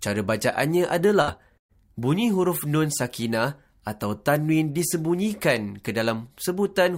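At 1.21 s the sound smears into a brief held sound for about 60 ms, and at 1.58 s a longer smear fades to silence before resuming at 1.72 s. Both are bursts of packet loss: the receiver stretched the last audio over roughly 60 ms and 120 ms of missing material, then resumed further on.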